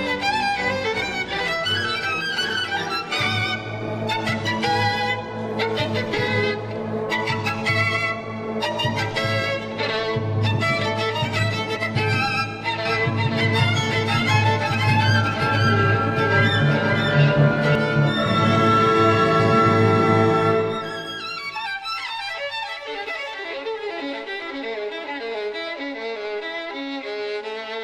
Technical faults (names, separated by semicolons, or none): doubled audio track